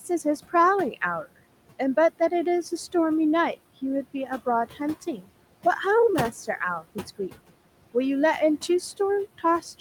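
Noise suppressor artifacts run through the whole speech clip: the suppressor pushes bands it judges to be steady noise down by about 18 dB frame by frame, so the room noise dips between phrases and returns under speech. A spectrogram shows a patchy, flickering noise floor rather than an even one.

At 5.17 to 5.27 s the suppressor mistakes part of the speech for noise and turns it down by up to about 11 dB for roughly a tenth of a second. That sound comes out swallowed and faint. On the waveform the envelope sags briefly, and the spectrogram loses energy in that short slice.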